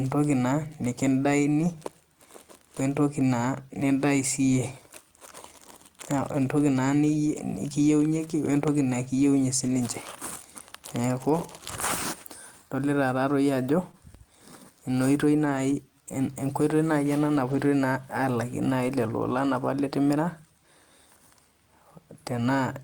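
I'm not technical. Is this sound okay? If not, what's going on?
No. At 9.67 to 9.73 s, 15.45 to 15.59 s and 17.51 to 17.57 s you hear a lost packet rebuilt from error correction: a rough, noisier stretch with no gap, played from a backup copy.

At 13.91 to 13.95 s there is a short concealed packet loss: about 20 ms never arrived, so the receiver guessed it, giving a brief smear or wobble rather than roughness.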